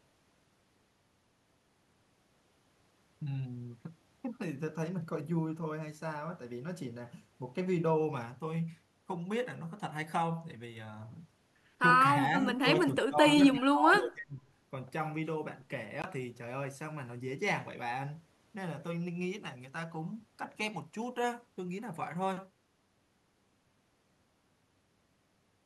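From 12.15 to 12.48 s the speech dips slightly, then from 12.81 to 14.46 s it drops much deeper, fading in pieces. That's likely speech suppressed in double talk, with the echo canceller ducking the speech along with the loudspeaker echo. At 16.02 to 16.06 s there's a tiny 17 ms dropout to silence before the speech resumes, likely a Bluetooth stall where the headphone buffer briefly ran dry.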